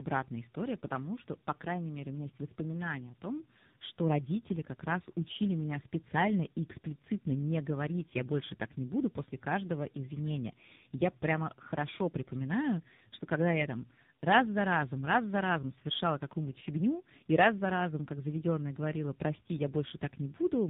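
Throughout the speech there is tandem speech coding: the signal was decoded and re-encoded at each link, ending in AMR-NB at 6.7 kbit/s, so each coder compounds the previous one's damage. Nothing reaches above 3.8 kHz, leaving the speech muffled, rough and warbly.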